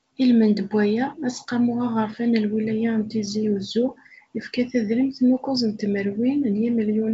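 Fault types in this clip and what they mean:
There are no fault types in this clip; the speech passes through G.722 wideband telephone coding at 64 kbit/s, with content reaching up to 7.7 kHz.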